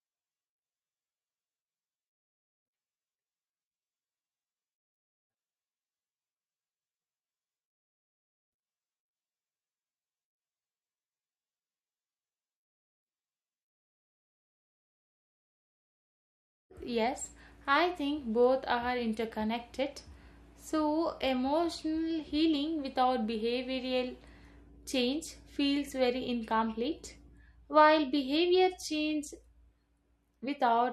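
A recording of speech, with no technical fault to be heard anywhere in it. There is nothing to mark with a time or trace to a cause.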